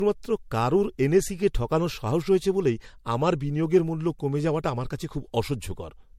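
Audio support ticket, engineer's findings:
Generation loss throughout the speech. Swirly, hollow tone. Consonant attacks smeared. Nothing above 16.6 kHz. Worse than one MP3 pass at the bitrate this suggests, around 64 kbit/s. Likely cause: about three MP3 re-encodes on shifted frame grids, stacking quantisation noise and spectral holes.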